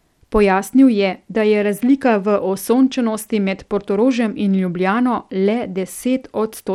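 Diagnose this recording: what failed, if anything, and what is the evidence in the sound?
Bluetooth SBC compression, throughout the speech, a codec-stage fault. The treble flickers and drops out while a gritty, aliased noise rides on the speech. This fits a starved bit pool around 96 kbps, likely from SBC's coarse sub-band quantisation leaving the upper bands without bits.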